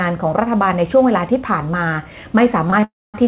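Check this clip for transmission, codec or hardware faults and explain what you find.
Three timing faults occur near the end of the clip, all on a narrowband call path with nothing above 4 kHz, which fits a G.711 mu-law codec.

Short stalls from late packets occur at 2.70 to 2.74 s and 2.80 to 2.84 s. Each time the jitter buffer ran empty and the receiver stretched the last sound, by 21 ms and then 19 ms, until the packet arrived. No audio is lost. Each stall is heard as a briefly held sound.

A call audio freeze runs from 2.84 to 3.16 s. The sound is held as a fading buzz or hiss for about 70 ms, then drops to silence for 230 ms before resuming where it stopped. Packets held up in transit, emptying the jitter buffer, are the likely cause. This inserts a 297 ms gap without losing any audio.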